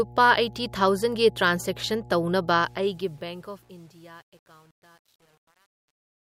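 A steady mains hum runs under the whole clip, a low 60 Hz tone with some of its low harmonics, sitting around 20 dB below the speech. It points to a ground loop or a nearby transformer coupling the power line into the signal path. Because the hum doesn't follow the speech level, it stays audible in pauses.

From 2.49 s to the end at 6.21 s, the fade-out shows truncation distortion. The fade starts around 2.5 s. The gain stage behind it, however, kept too few bits and added no dither, which fits roughly 9-bit resolution. As the level falls toward the smallest step, the waveform collapses into coarse square steps. From 3.16 s onward the tail sounds gritty and buzzy instead of thinning out cleanly.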